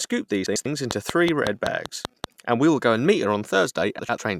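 From 0.46 to 0.66 s, frames arrive out of order. Two neighbouring 96 ms blocks, which fits four frames each, are decoded in swapped order. The speech briefly flutters and garbles. No time is lost.

A train of clicks follows from 0.91 to 2.25 s, ending just before "and we will go". About seven sharp, similar pulses tick at a regular 5.3 per second. They peak about 15 dB above the speech. Likely cause: interference or a faulty connection.

From 3.99 to 4.18 s, the same frame swap recurs. Two 96 ms blocks play exchanged, producing another short garbled flutter.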